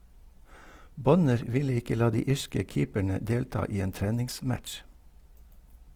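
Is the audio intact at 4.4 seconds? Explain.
No. Across the whole clip, including 4.4 s, a low bitrate likely squeezed the speech through Opus compression in its music mode, refilling starved bands with folded or noise content, so the audio sounds rough and grainy, fitting roughly 24 kbps, with nothing above 20.4 kHz.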